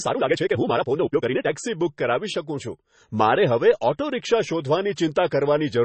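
From 0 to 1.5 s, the speech runs at nearly twice its pace with unchanged pitch. This is a time-stretched section, likely squeezed by dropping short pieces, so it sounds rushed.

Throughout, nothing is heard above 8.3 kHz, with a dull top. This points to low-bitrate audio saved at a high bitrate: an earlier MP3 encoding's losses remain.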